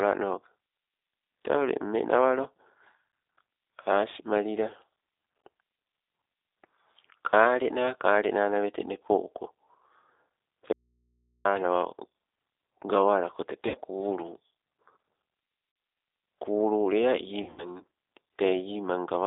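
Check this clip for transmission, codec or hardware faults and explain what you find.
Three faults are present: G.729 coding throughout, one dropout to a faint residue, and three bursts of VoIP packet loss concealed by the speech codec.

G.729 codec, throughout: the speech has been squeezed through a low-rate model coder. The sound fits G.729A at 8 kbit/s. Instead of sending the waveform, it sends a vocal tract filter, pitch and a few pulses every 10 ms, and the line passes only about 300 Hz to 3.7 kHz. The result is plainly audible damage: thin, band-limited speech with a rough, slightly synthetic texture.

Audio dropout to a faint residue, 10.73 to 11.45 s: the wanted signal vanishes for about 0.72 s, likely because the input connection broke while the path behind it stayed live. The speech cuts off abruptly mid-flow. The gap holds only mains hum, very far below normal speech level, and then the speech snaps back just as suddenly. 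It sounds nothing like a natural pause or fade.

VoIP packet loss concealed by the speech codec, at 13.68 to 13.76 s, 15.72 to 15.76 s and 17.42 to 17.68 s: packets failed to arrive and the decoder filled the holes by extending its last pitch and filter at falling gain. The losses are 60 ms and 40 ms in the first two cases. In the third, 140 ms is lost in pieces across 160 ms, with the longest stretch lasting 80 ms. Each gap turns into a smeared, buzzy tone or coloured noise that fades, and the speech stays weak and distorted briefly after it resumes.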